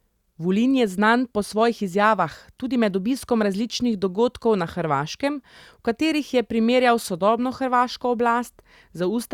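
Nothing technical goes wrong anywhere in this speech recording, so there's no fault to point out.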